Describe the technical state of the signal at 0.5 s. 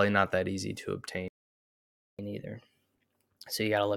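At 0.5 s the speech signal is intact, with no audible fault at that point.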